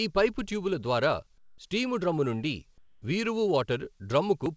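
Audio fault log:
1.38–1.58 s and 2.78–3.02 s: comfort noise in place of the background. After "ఈ పైపు ట్యుబుల ద్వారా" and "ట్యుబుల ద్వారా స్టీము డ్రమ్మునుండి", the real background gives way to steady, featureless hiss, about 8 dB then about 3 dB quieter, likely from the sender muting pauses while the receiver fills them with synthetic noise. A spectrogram shows smooth, texture-free patches of 200 and 240 ms, capped at 8 kHz like the rest of the call audio, and the waveform shows a flat, lower noise floor at both points.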